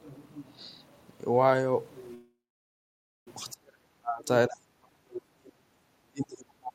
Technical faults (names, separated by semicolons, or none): call audio freeze; speech suppressed in double talk